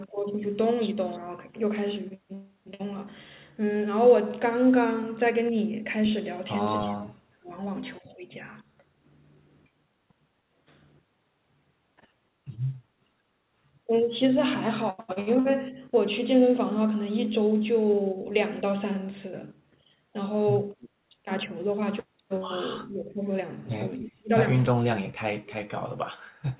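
At 6.84 to 7.51 s, 22.82 to 23.26 s, 24.0 to 24.31 s and 24.75 to 26.4 s the speech dips or cuts out, by up to about 40 dB, most likely speech suppressed in double talk, with the echo canceller ducking everything while both sides spoke. At 20.8 and 24.0 s there's a copy about 25 and 15 dB below the speech, delayed about 309 ms, likely an echo leak from a loudspeaker end.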